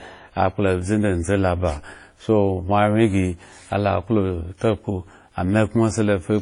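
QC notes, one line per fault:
Throughout: transcoding between lossy codecs, likely WMA then HE-AAC; nothing above 10.5 kHz, with both codecs' artefacts layered as the second re-encodes the first's damage.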